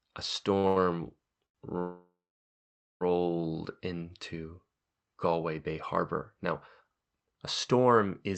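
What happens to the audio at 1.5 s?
A sound is held 87 ms too long from 1.46 to 1.57 s: a short stall from a late packet, stretched while the jitter buffer ran empty.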